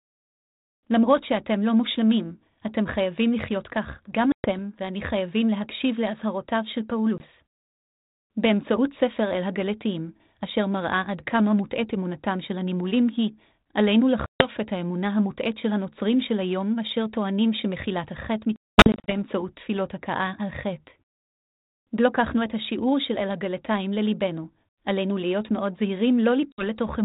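Packet loss on an ADPCM call breaks this speech five times. Hard-edged silent holes open at 4.32 s (120 ms), 7.18 s (20 ms), 14.26 s (140 ms) and 26.52 s (60 ms). From 18.56 to 19.11 s, 360 ms of gaps scatter over 520 ms, the longest 220 ms. After each hole, the decoder's adaptive predictor and step size no longer match the sender's. Speech returns slightly distorted, then settles.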